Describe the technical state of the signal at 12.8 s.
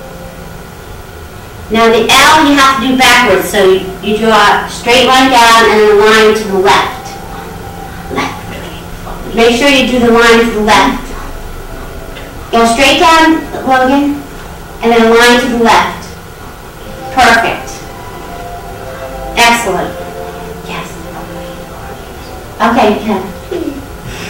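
Hard clipping runs from 12.53 to 13.99 s. The signal is driven about 14 dB past what the stage can pass, so its peaks are sheared flat. Those squared tops add high harmonics, heard as a harsh fuzz on every loud moment.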